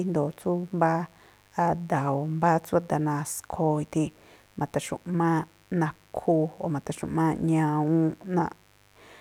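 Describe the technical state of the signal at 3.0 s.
At 3.0 s, as throughout the clip, a mains buzz sits well below the speech: switching spikes twice per 50 Hz cycle spray harmonics into a steady, raspy drone.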